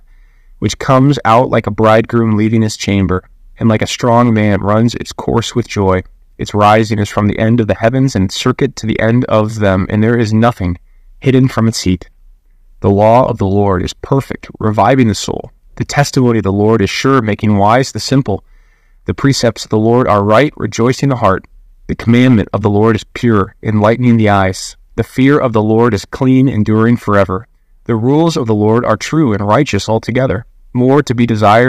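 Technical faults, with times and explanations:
Throughout, hard clipping: the speech is driven about 7 dB past full scale, so roughly one percent of samples are cut flat, adding crackle on peaks.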